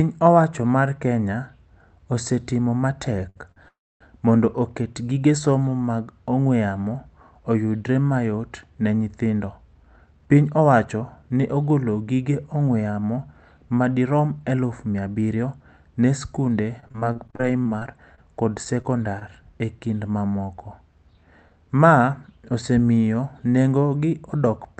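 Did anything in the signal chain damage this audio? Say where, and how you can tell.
Yes. All of the damage comes from the network and the receiver's jitter buffer. The audio passes through an Opus call codec whose sound is limited to about 8 kHz, consistent with a roughly 32 kbps setting.

Right after "osetimo matek" there are two short stalls from late packets. At 3.29 to 3.38 s the speech holds one sound for about 62 ms, with a faint buzzy sustain. At 3.52 to 3.58 s a similar hold lasts about 46 ms. In both cases a packet missed its playout time, so the receiver stretched the last sound until the packet arrived. Nothing is lost, but the timing slips slightly each time.

At 3.68 to 4.02 s, just before "mondo oket gige somo", there is a longer call audio freeze. The last sound briefly smears into a decaying buzz, then goes quiet for about 0.27 s, and the speech resumes exactly where it stopped. 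This is likely a burst of held-up packets that drained the jitter buffer completely. The content is delayed rather than dropped, so a gap has been inserted into the speech.

Two passages have a jitter buffer speed-up. From 9.19 to 11.37 s the speech runs about 13% fast, and from 14.39 to 15.53 s, leading into "ne sikunde", about 12% fast. The pitch stays natural, but delivery sounds hurried. The buffer held more audio than it aims for. The receiver shed roughly 0.3 s and 0.15 s respectively by trimming many small pitch-period slices.

From 16.80 to 19.23 s the speech turns choppy. This is repeated packet loss with a robotic sound. There are 15 separate dropouts, each no longer than about 30 ms. Each one is patched by extending the preceding sound, which covers about 13% of the stretch. Some speech is actually missing here, and the rapid succession of patches produces the mechanical, robotic texture.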